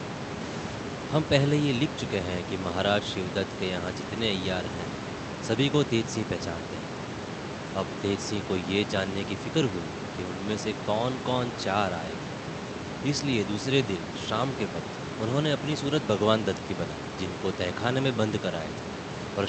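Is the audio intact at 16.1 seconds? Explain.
Yes, the speech at 16.1 seconds is intact, with no dropout, glitch or other fault at that moment.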